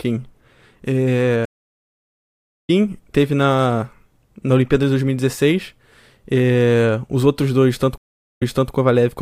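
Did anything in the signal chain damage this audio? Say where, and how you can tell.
Yes: two stream reconnects at the network stage. At 1.45 s the audio cuts to silence for 1.22 s, then resumes at "teve na na" roughly 0.7 s further on. At 7.98 s a 0.44 s gap ends with 0.31 s replayed. Each time, the player lost its connection, reconnected, and restarted decoding mid-stream.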